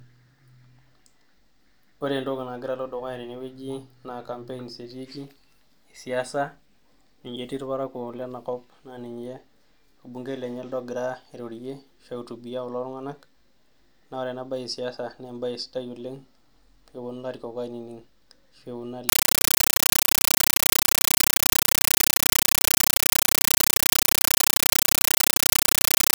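Speech. From 19.09 s to the end, a compressed stream is played as audio. Undecoded AC-3 data gives loud, chattering static: 9.33 ms bursts, 31.25 per second.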